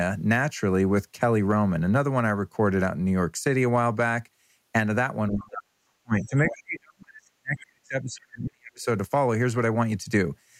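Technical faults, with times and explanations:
5.3–8.84 s: speech suppressed in double talk. The speech dips and drops out, by around 40 dB at worst, likely because the echo canceller turned down both overlapping talkers.
6.48–6.55 s: other side's voice leaking through. A brief scrap of a second voice sits roughly 15 dB below the speech, likely loudspeaker echo the canceller failed to remove.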